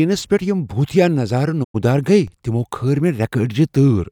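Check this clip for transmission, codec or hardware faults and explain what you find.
Two faults show up in this speech clip: a digital broadcast dropout and a DC step.

From 1.63 to 1.76 s there is a digital broadcast dropout. The receiver stopped getting valid frames and muted, fading out over about 20 ms. Roughly 96 ms of programme is gone, which fits about three lost frames. Speech resumes at "گیہ تِمو".

At 2.28 s a DC step occurs. The waveform's zero line jumps suddenly, as from a converter recalibrating or an offset input being switched in. The offset then decays, consistent with a 20 Hz high-pass. It is heard as a brief low thump under the continuing speech.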